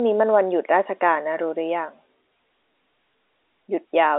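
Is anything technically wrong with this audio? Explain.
No, nothing stood out on listening to this telephone-band speech beyond what its G.711 line coding imposes, with everything above about 3.8 kHz absent.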